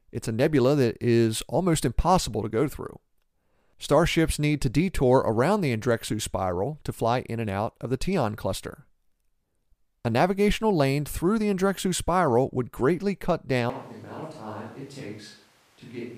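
A switch to a distant microphone occurs at 13.70 s, just after "would greatly cut", and lasts to the end. The speech abruptly turns roomy, hollow and bass-light, drops around 10 dB, and room noise rises to roughly 25 dB below it, likely because the close microphone's feed failed.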